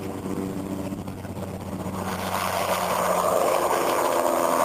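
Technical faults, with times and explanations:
0.97–0.99 s, skip ahead: playback jumps straight past around 0.7 s of sound with no filler, so the two sides butt together almost directly. A chunk went missing in transit or got dumped when the jitter buffer overflowed while later audio was already queued.
1.07–2.17 s, jitter buffer speed-up: the sound runs about 10% fast at unchanged pitch and feels a bit rushed. The buffer was holding more than its target, so the receiver snipped out lots of tiny pitch-period slices, roughly a tenth of a second in total, to pull the delay back down.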